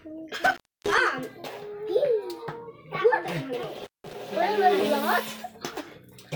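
From 0.42 to 1.00 s, an intermittent contact cuts the sound. A loose plug or cable opens the line for about 292 ms, with crackle at each edge. It happens again from 3.77 to 4.13 s, dropping out for about 171 ms.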